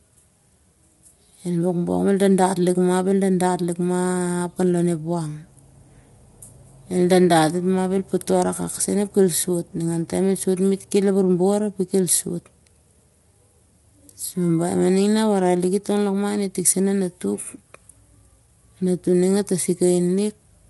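All the way through, the speech sounds rough and grainy, with noise filling in between the harmonics and nothing above about 11.7 kHz. That's likely low-delay AAC compression: short frames smear pitch detail, and the damage fits a bitrate around 32 kbps.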